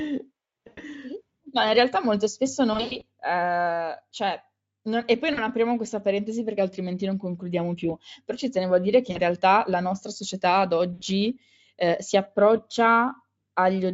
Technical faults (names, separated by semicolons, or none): VoIP packet loss concealed by the speech codec